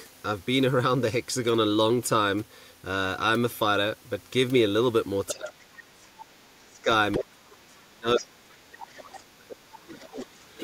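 Residual echo the canceller likely failed to remove lets the other side's voice leak through at 5.27 to 5.35 s, a scrap about 10 dB below the speech. At the same moment, speech is suppressed in double talk from 5.32 to 6.12 s, likely because the canceller ducked both voices. The speech dips by as much as around 30 dB, and the suppression affects most of that stretch. A second, longer suppression runs from 6.58 to 10.29 s, with the same dips, affecting roughly three seconds. Within and after it, the far voice leaks again at 7.12 to 7.23 s, about 10 dB down, then at 8.77 to 9.21 s, about 20 dB down, and at 10.07 to 10.61 s, about 25 dB down, each fainter than the last.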